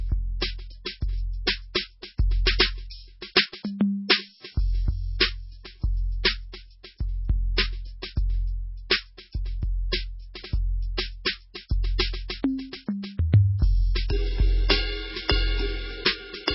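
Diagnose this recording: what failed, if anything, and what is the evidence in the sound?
Codec trouble: the music stops dead at 5.6 kHz all the way through and sounds heavily watery and swirly underneath. It's likely MP3 compression at a rate that fits roughly 16 kbps. At that rate the encoder chops off the treble and zeroes weak frequency lines from frame to frame.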